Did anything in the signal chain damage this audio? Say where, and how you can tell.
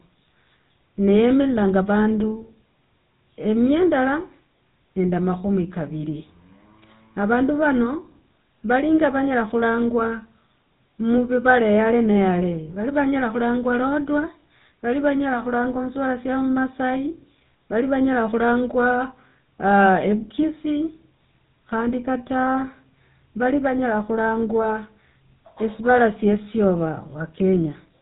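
Yes. The damage happens at the codec stage and runs through the whole speech clip. It is the GSM full-rate codec. Nothing reaches above 4 kHz, so the top end is simply missing. The speech has a buzzy, gravelly roughness, and it is plainly audible. That texture comes from how the codec works. It models the vocal tract and drives it with regularly spaced pulses, keeping only every third excitation sample. The sound fits a 13 kbps GSM full-rate stream.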